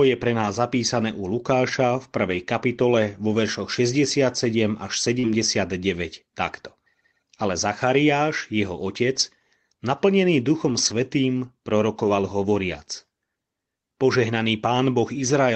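At 2.27 to 2.41 s, just before "kapitole vo veršoch", a lost packet was rebuilt from error correction. About 80 ms, consistent with several separate packets, plays from low-bitrate redundant copies carried in the following packets. There is no gap, but that stretch sounds rougher and noisier than the surrounding Opus call audio.

At 5.19 to 5.25 s a short concealed packet loss follows. Roughly 40 ms never arrived in time, and the decoder extrapolated the preceding sound to fill it, producing a brief smear before the real audio resumes.

Overlapping that, from 5.23 to 5.33 s, is another error-correction rebuild of about 60 ms.

The same rough, grainy patching recurs at 9.15 to 9.21 s (about 40 ms), 10.69 to 10.91 s (about 120 ms, the longest) and 11.99 to 12.09 s (about 60 ms).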